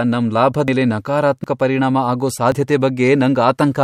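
At 0.68 s the speech jumps, skipping ahead by about a tenth of a second. It happens again at 1.44 s, just before "ಪರಿಣಾಮ ಆಗೋ", losing a bit less, and at 2.52 s, right after "ಪರಿಣಾಮ ಆಗೋ", where only a few tens of milliseconds go. None of these leaves a gap. The two sides butt straight together. That's the signature of a dropped buffer (overrun), likely the capture side not reading its samples before they were overwritten.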